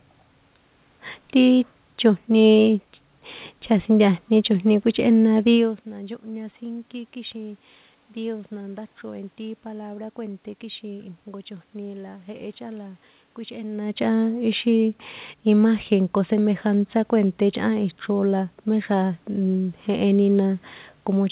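Nothing's gone wrong in this speech clip: the room noise and the shifts in level around 5.5 and 13.5 s, where the talker moves relative to the microphone, belong to the recording, and the call-path audio stopping at about 4 kHz is simply what a 64 kbps G.711 mu-law phone codec does.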